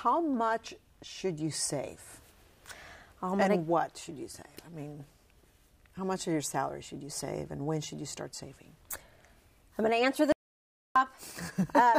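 At 10.32 s the sound cuts off abruptly, mid-flow. This is an audio dropout to silence. For about 0.63 s, until 10.96 s, there is nothing at all. Even the room tone vanishes, so the gap is silent. The likely cause is a lost input, such as a brief disconnect or a stray mute, while the recorder kept writing zeros. Whatever happened in that stretch is gone. The sound then resumes just as suddenly.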